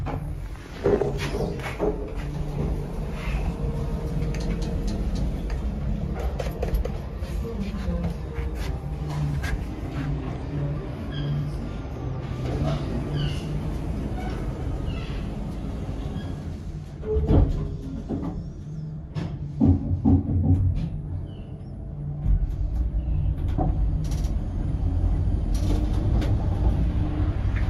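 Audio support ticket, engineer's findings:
No fault found on listening. Nothing audible to trace to any component, so no action is indicated.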